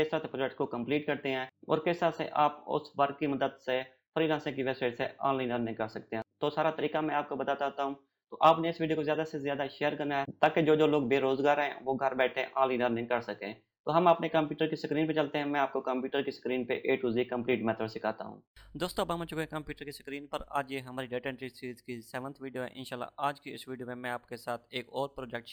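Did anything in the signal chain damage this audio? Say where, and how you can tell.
Yes: imaging from linear upsampling throughout, introduced at sample-rate conversion. Going from 22 kHz to 44.1 kHz by straight-line interpolation dulls the top of the original band. It leaves a mirrored copy between 11.025 and 22.05 kHz, roughly 40 dB down, heard as a faint metallic shimmer on high-frequency content.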